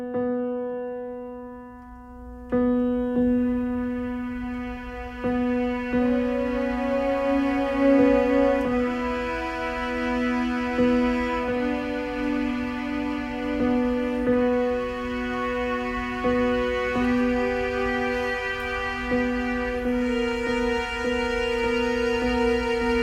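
No technical faults can be heard anywhere in the recording. Nothing in the audio stands out as a problem to flag.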